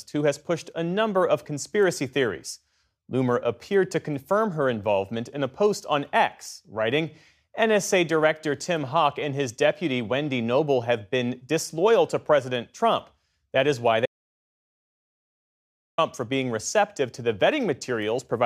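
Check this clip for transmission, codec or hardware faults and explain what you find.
One fault turns up, an audio dropout to silence. From 14.06 to 15.98 s the sound cuts off mid-flow into dead silence with no room tone, losing about 1.9 s, likely because the input was lost while recording continued.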